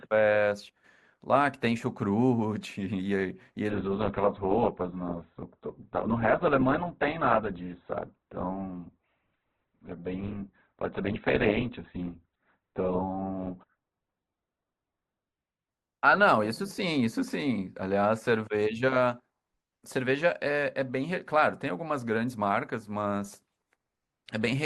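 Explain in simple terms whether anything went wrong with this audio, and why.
From 3.70 to 15.70 s the speech suddenly turns dull, losing everything above 4.4 kHz. This is an adaptive stream at a lower bitrate, where a slowed connection forced a cheaper version. Unlike a dropout, the switch leaves no silent gap.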